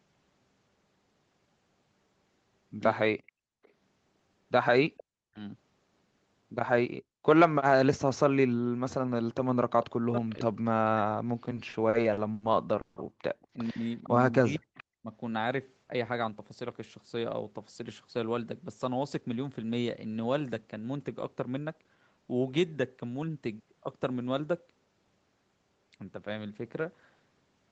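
Echo leak, 3.27 to 3.69 s: a faint copy of the far side's speech, about 455 ms late, slips through, likely left over because the loudspeaker end's echo canceller did not remove all of it. Background gated by the echo canceller, 3.32 to 3.62 s: the canceller clamps the microphone down by about 33 dB, so the room sound drops out for roughly 300 ms and then returns. Echo leak again at 4.97 to 5.04 s: a brief, somewhat louder scrap of the same 455 ms-delayed echo. Speech suppressed in double talk, 5.25 to 5.39 s: with both sides talking, the canceller likely turns the talker down as well, pulling the speech under by about 40 dB for a moment. The same suppression returns over a longer stretch, 7.72 to 11.18 s, where the speech dips and cuts out in pieces for around three seconds in total. Within that stretch, echo leak at 10.29 to 10.34 s is a short scrap of delayed echo. Repeated stalls (stutter), 11.45 to 12.44 s: packets keep arriving late, so the jitter buffer runs dry eight times, with the longest wait 80 ms. 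The receiver stretches the last sound each time, adding about 240 ms of filler, and the speech drags and stutters with nothing lost. Double-talk suppression again, 12.58 to 15.12 s: the speech ducks and breaks up for roughly a second in total. Inside it is a call audio freeze at 12.81 to 12.99 s: delayed packets likely empty the buffer, the last sound is held as a fading 150 ms buzz, and the speech then resumes where it stopped. Echo leak at 13.42 to 14.83 s is the longest and clearest stretch of the 455 ms-delayed echo. Jitter buffer speed-up at 15.93 to 16.63 s and 17.17 to 18.28 s: with too much audio queued, the receiver trims pitch periods, so the speech runs about 5% faster at the same pitch. At 23.14 to 23.36 s it runs about 15% faster and sounds noticeably hurried.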